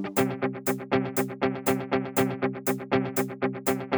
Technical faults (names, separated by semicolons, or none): none